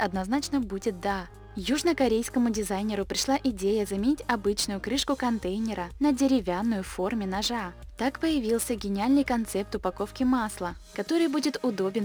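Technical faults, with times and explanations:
Throughout: crude rate conversion. The sample rate was changed by dropping or repeating the nearest samples with no filtering, in a pattern that fits a conversion from 48 kHz to 44.1 kHz. Those irregular skips and duplicates leave an error signal roughly 25 dB below the sound itself, made of shifted, inharmonic copies of it. The result is a gritty, inharmonic fizz that rides on the louder and brighter moments and follows them.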